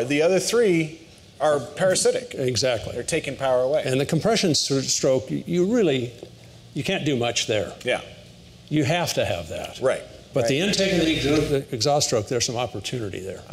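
Nothing stood out as a technical fault on listening.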